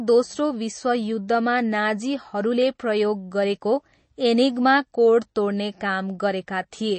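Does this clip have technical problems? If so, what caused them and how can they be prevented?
Yes. Throughout the speech there is nothing above about 8.3 kHz, so the top is dull and closed in. The sound also has a watery, swirly quality, and s sounds turn metallic. The likely cause is MP3 compression at a low bitrate, which fits about 32 kbps. Short of bits, the encoder cut the treble at a fixed point and kept zeroing faint frequency lines. Those lines flicker on and off between frames. Encoding at a higher bitrate, or keeping an uncompressed master, would prevent it.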